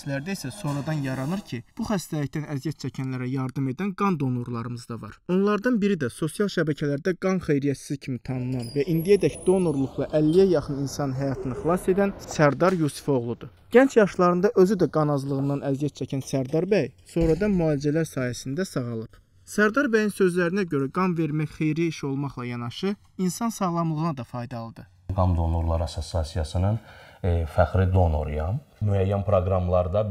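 Throughout, the channels drift apart. Their clocks differ by roughly 100 ppm, so the delay grows to about 1.5 ms, giving slow, sweeping flanging in mono.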